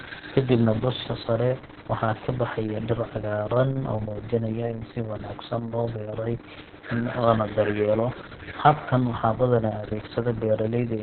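Throughout the speech, heavy Opus voice compression is audible: the codec runs its SILK linear-prediction mode narrowband, cutting everything above 4 kHz, and codes the excitation so coarsely that the voice sounds muffled, hoarse and faintly robotic, consistent with roughly 6 kbps in 60 ms frames.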